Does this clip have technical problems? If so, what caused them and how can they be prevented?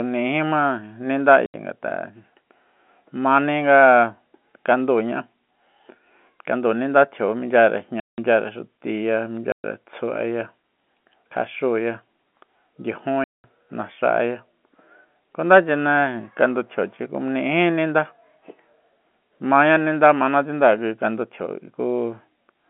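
Yes: the speech drops into abrupt silent holes at 1.46 s (80 ms), 8.0 s (180 ms), 9.52 s (120 ms) and 13.24 s (200 ms). This is packet loss filled with silence. Lost packets were replaced by nothing, and the gap lengths fit 20 ms packets. Packet loss concealment and a jitter buffer would fill such gaps smoothly.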